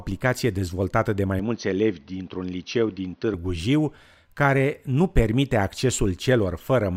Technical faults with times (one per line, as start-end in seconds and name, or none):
1.39-3.34 input switched to a poorer device